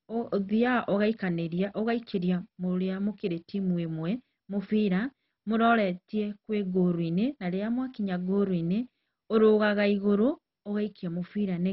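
Speech with heavy MP2 compression damage throughout. Nothing is heard above 5.6 kHz, so it sounds dull. A gurgling, granular distortion runs through it. The likely cause is MPEG Layer II coding at a very low bitrate, near 32 kbps, which starves the upper sub-bands of bits.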